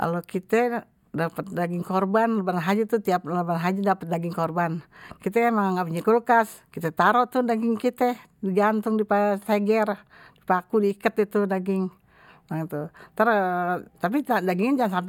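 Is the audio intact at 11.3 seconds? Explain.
Yes, the audio is intact at 11.3 seconds, with no fault audible at that point.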